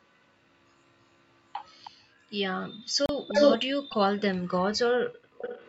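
At 1.84 to 1.91 s a faint, delayed copy of the speech surfaces, most likely an echo leak: a far-end loudspeaker's echo canceller let its microphone pickup through, returning the sound 313 ms late, well below the speech, visible as a weak repeat of earlier spectrogram patterns. At 3.06 to 3.09 s the audio drops out for 32 ms, a flat gap in the waveform and a blank vertical stripe on the spectrogram, likely a Bluetooth stall where delayed packets left the headphone buffer empty. The echo returns from 3.28 to 3.58 s, here slightly louder than the speech itself, and again from 5.38 s to the end at a moderate level, both smearing shifted copies of harmonics across the spectrogram.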